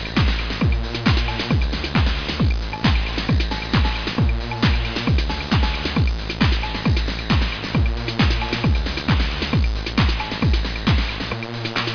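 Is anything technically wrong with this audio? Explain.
No, nothing is technically wrong with this audio.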